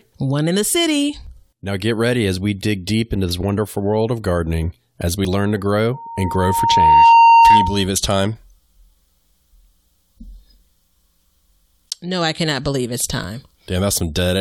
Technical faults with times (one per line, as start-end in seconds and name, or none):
1.27 overlap between stream segments
5.25 overlap between stream segments
5.94-7.88 loudspeaker feedback squeal
13.24 overlap between stream segments